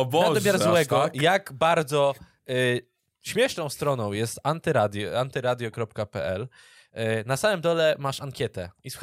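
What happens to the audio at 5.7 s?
Nothing goes wrong at 5.7 s; the speech carries on intact through that moment, with no dropout, click, glitch or other fault.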